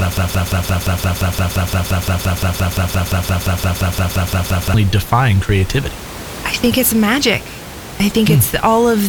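From the start until 4.74 s, a broken-record loop is already under way. A single 0.17 s fragment repeats back to back, likely because the stream stalled and kept resending its last piece, so the intended audio is lost. It sounds like a rapid mechanical stutter. On a waveform or spectrogram, identical blocks tile evenly every 0.17 s, with no change between them. Normal speech resumes with "define creativity I think", over room noise about 18 dB below it.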